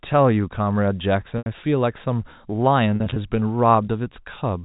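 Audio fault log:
1.38 to 1.46 s and 2.96 to 3.16 s, packet loss with pitch repetition: the first gap is a solid 80 ms dropout, so the concealment loops the last pitch cycle, buzzes briefly, then fades toward silence before a quick cross-fade back in. The second scatters about 100 ms of loss across 200 ms in runs no longer than 40 ms, giving a choppy, held, slightly buzzy stutter instead. Both fit 20 ms packets going missing, heard through the usual 4 kHz G.711 phone band.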